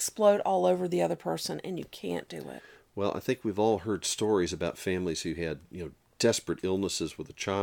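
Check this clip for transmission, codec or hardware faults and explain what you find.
Nothing faulty is audible at any point in the speech.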